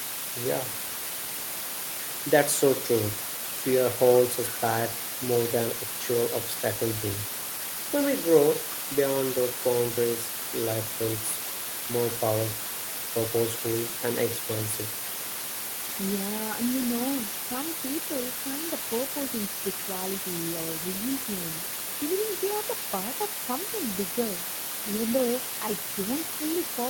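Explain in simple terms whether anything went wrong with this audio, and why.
Two things went wrong. The first is low bit depth with dither. The whole clip sits under a steady, even hiss that's nearly as loud as the speech itself. That comes from storing the sound with very few steps, which fits a 4-bit signal, with dither turning the rounding error into plain noise instead of harsh distortion.

The second is echo leak. You'll hear a faint copy of the speech trailing about 0.4 s behind at 4.43–7.55 s, 10.11–11.61 s, 13.96–15.81 s and 23.45–23.94 s. The likely cause is that someone's loudspeaker sound got back into their microphone and the echo canceller didn't fully remove it.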